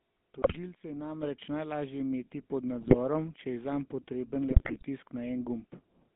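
Throughout, the speech has passed through the GSM full-rate codec, whose sound points to the 13 kbps first-generation GSM coder. It rebuilds the voice from a vocal-tract model driven by coarse pulse excitation, and the line passes only 200 Hz to 3.6 kHz. The result is plainly audible buzzy, gravelly roughness and a muffled top end.

GSM bit errors first strike from 0.42 to 0.57 s. Corrupted bits reached the decoder and scrambled its filter, pitch and gain values, so the speech breaks into squawking, gargling distortion with sudden level jumps for that stretch.

At 1.23 s, just before "najlažje imeti pod", the microphone volume was stepped up. The call software raised the input gain in one move, so voice and background together jump about 7 dB louder from that instant.

The GSM bit errors return from 2.81 to 2.95 s, right after "najlažje imeti pod", and again from 4.50 to 4.83 s, the longest burst. 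Each time the damaged decoder parameters bend the spectrum and spike the level, producing pops, squawks and gargled breakup.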